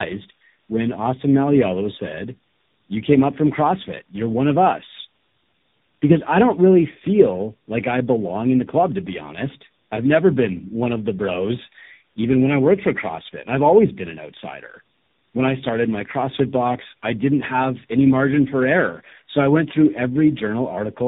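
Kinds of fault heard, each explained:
tandem speech coding: three speech coders in series each re-encoded the previous one's degraded output, leaving the speech rough, muffled and warbly, with nothing above 3.8 kHz.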